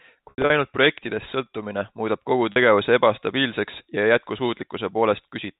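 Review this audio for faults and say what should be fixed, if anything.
Packet loss with pitch repetition occurs at 0.30 to 0.50 s, where about 140 ms of gaps scattered over 200 ms, the longest run 80 ms, are bridged by a repeated pitch period that buzzes and fades, and at 2.52 to 2.56 s, a brief 40 ms held buzz. The G.711 telephone band around it is intact. Prevent it with a jitter buffer and forward error correction or redundancy on the network path.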